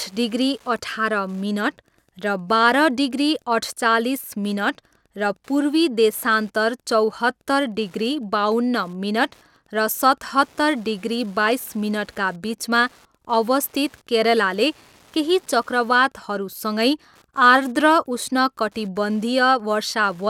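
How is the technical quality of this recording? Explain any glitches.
There's one real problem with the recording, and it runs the whole way through. Wi-Fi interference sits under the speech from start to finish as a steady ticking about ten times a second, well below the speech level. A nearby Wi-Fi radio's beacon, sent every 102.4 ms, gets picked up and rectified by the audio circuit, so each pulse comes out as a faint click.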